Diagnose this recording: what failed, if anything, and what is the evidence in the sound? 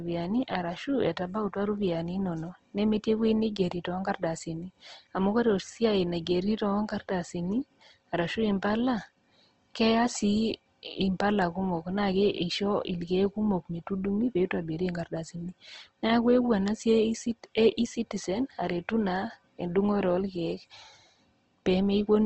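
The codec stage failed, throughout the clip. The speech sounds grainy and rough, with plainly audible damage and nothing above 8.2 kHz. Bands are filled with noise rather than dropping out, so there is less swirl than MP3 would give. This is likely Opus compression in music mode, fitting roughly 16 kbps.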